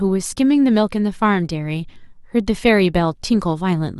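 A short recording of speech, with nothing technically wrong to point to anywhere in it. No timed events or causes need describing.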